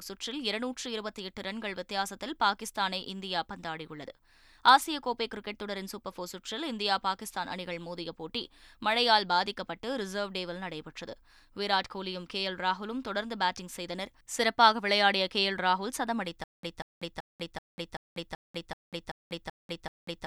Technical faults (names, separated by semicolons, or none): stutter with silent gaps